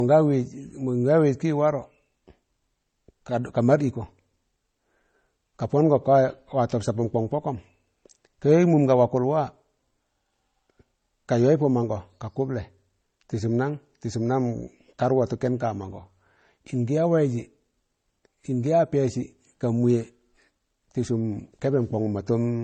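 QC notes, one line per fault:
Throughout: transcoding between lossy codecs. Layered swirly, smeared speech artefacts with a hard 9 kHz spectrogram ceiling, which points to a low-rate MP3 likely re-encoded as HE-AAC.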